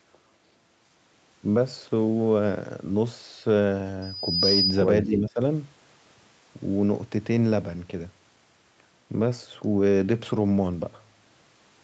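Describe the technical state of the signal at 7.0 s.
At 7.0 s the speech is intact, with no dropout, click or distortion, only the normal band limit of the call path, which leaves nothing above 8 kHz.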